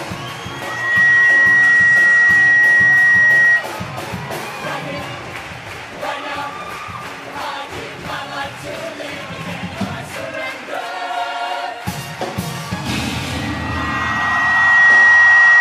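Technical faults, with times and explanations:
0.53–3.68 s and 13.32–15.6 s, loudspeaker feedback squeal: a single tone at 1.9 kHz swells out of the sound, in about half a second the first time and about a second and a half the second, then sits roughly 15 dB above everything else. The second squeal runs to the end of the clip. The microphone is hearing its own loudspeaker, and at 1.9 kHz the loop gain exceeds one, so that frequency keeps feeding itself. On a spectrogram each appears as one bright horizontal line at 1.9 kHz. On the waveform the envelope ramps up and then stays swollen.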